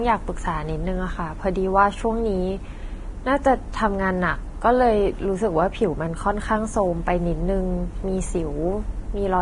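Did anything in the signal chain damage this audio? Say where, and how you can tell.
Yes. The damage is at the codec stage and lasts the whole clip. The speech is hissy and grainy, with softened consonant onsets. A spectrogram would show a hard ceiling at 10.6 kHz and speckled noise in the upper bands. This is likely heavy Vorbis compression at about 30 kbps, where treble detail is quantised into noise.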